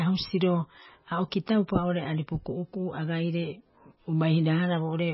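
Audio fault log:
Throughout: MP3 compression, heavy. Nothing is heard above about 5.6 kHz, and weak detail flickers in and out, giving the speech a watery, swirly quality with smeared attacks and chirpy s sounds. This is likely a very low bitrate, around 17 kbps, forcing the encoder to drop treble and sparse spectral lines.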